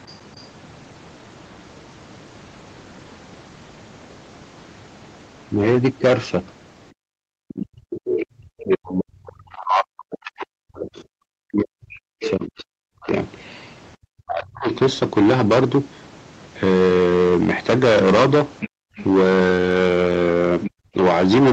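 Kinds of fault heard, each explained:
hard clipping: Across the whole clip the speech is driven about 18 dB past what the signal path can carry, so roughly a tenth of the samples hit the ceiling and are sliced flat. This is heard as a constant harsh fuzz on every loud syllable. A waveform shows squared-off plateaus on the peaks, and a spectrogram shows smeared harmonic energy reaching up toward the 8 kHz top of the band on voiced sounds.
other side's voice leaking through: A second voice sits underneath the speech, most likely loudspeaker echo that the echo canceller failed to remove. It is faint near the start, from 0.07 to 0.42 s, but much stronger, only about 10 dB below the talker, from 7.49 to 14.78 s and again from 18.6 to 20.7 s. A spectrogram shows a second, unrelated harmonic pattern overlapping the main one, and the waveform shows extra activity in the gaps between phrases.
speech suppressed in double talk: Where the talker and the leaking far voice overlap, the talker is repeatedly pushed down, likely by the echo canceller clamping both sides at once. 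Between 7.61 and 14.68 s about five seconds of speech dips or drops out, at times by something like 40 dB, and a short bite goes missing from 20.69 to 20.94 s. On a waveform the envelope shows sudden holes mid-phrase, and a spectrogram shows columns of near-silence cutting through harmonics.
background gated by the echo canceller: From 18.69 to 18.97 s, just as the far voice starts coming through, the microphone is shut down hard and the room sound falls away by about 40 dB for roughly 0.3 s before returning. It is heard as a brief dead pocket where the ambience vanishes. On a spectrogram the background noise floor turns to blank for that short stretch, and on a waveform the trace shrinks sharply before the noise reappears.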